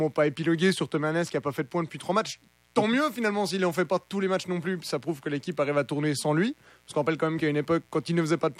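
A steady, raspy mains buzz sits under this speech recording for its whole length, about 40 dB below the speech. Its 60 Hz fundamental points to sharp switching spikes from a dimmer, rectifier or missing shield. On a spectrogram it appears as evenly spaced horizontal lines at 60 Hz harmonics, climbing into several kilohertz.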